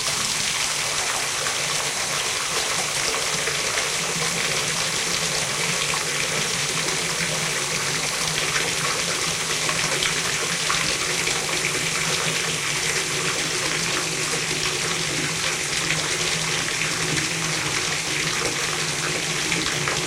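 No technical faults can be heard anywhere in this recording of sounds.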